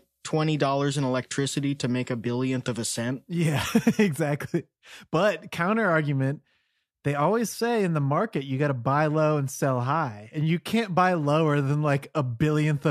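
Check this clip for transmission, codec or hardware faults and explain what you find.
The speech signal shows no transmission, codec or hardware faults anywhere in the recording.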